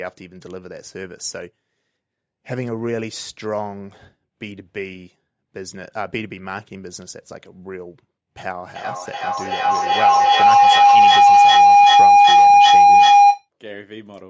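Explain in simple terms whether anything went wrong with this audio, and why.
From 8.47 to 13.49 s a feedback howl builds: a sound loop between two devices grows into a whine near 700 Hz, repeating about every 0.4 s. Unlike an echo, it gets louder instead of fading.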